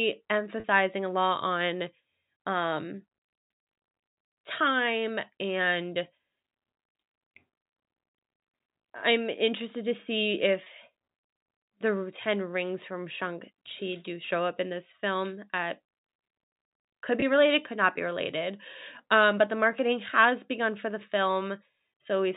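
A brief held, buzzy smear sits at 0.60–0.64 s just before "a lot", at 10.64–10.66 s right after "I'm interested to see", and at 17.20–17.22 s just before "related could not be". Each is packet loss with pitch repetition: the receiver bridged a 40 ms gap, then two 20 ms gaps, consistent with two packets and then single packets, by repeating the last pitch period, all within the 4 kHz G.711 telephone band.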